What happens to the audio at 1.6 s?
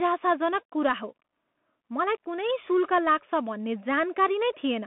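At 1.6 s the speech carries Bluetooth CVSD headset codec damage, present for the whole clip. Each sample is a single up-or-down bit, which fits a 64 kbps stream. Nothing passes above 3.8 kHz. S sounds turn scratchy, and granular hiss sits underneath.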